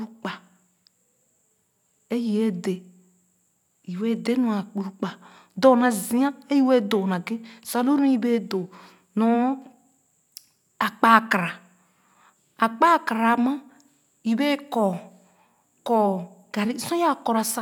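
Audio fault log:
No faults were found in this speech recording.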